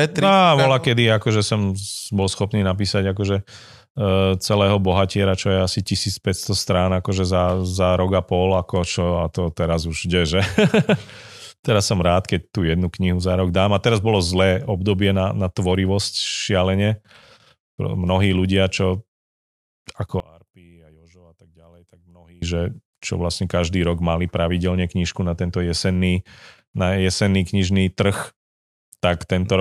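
From 20.20 to 22.42 s, the speech suddenly drops by about 28 dB and turns faint. The voice and background nearly disappear. Only a faint residue remains. The likely cause is one channel inverted. One stereo channel has its polarity flipped. When the two channels are summed to mono, everything they share cancels out. What survives is just the small difference between them. Full level returns at 22.42 s.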